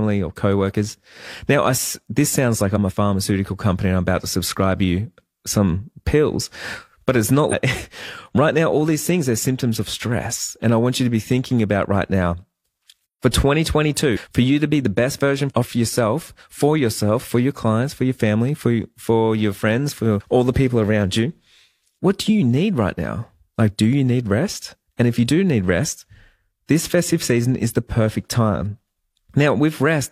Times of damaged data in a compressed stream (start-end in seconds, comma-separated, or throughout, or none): 7.48-7.54, 14.12-14.17, 20.16-20.22